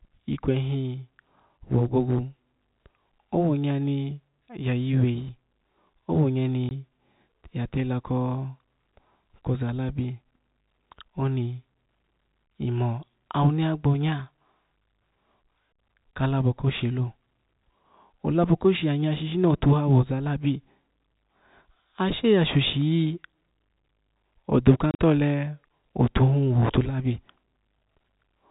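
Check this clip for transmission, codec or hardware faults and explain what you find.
Two brief dropouts from packet loss filled with silence, at 6.69–6.71 s and 24.91–24.99 s, break up the speech. The narrowband G.711 telephone coding beneath them is audible as the usual 4 kHz ceiling.

In the first, about 20 ms of signal vanishes, which fits two lost 10 ms packets. The second scatters roughly 70 ms of gaps across 80 ms, the longest run 40 ms. The receiver inserts silence, so the waveform shows flat, silent stretches with abrupt edges, and the spectrogram shows blank vertical slots with thin broadband lines at each boundary.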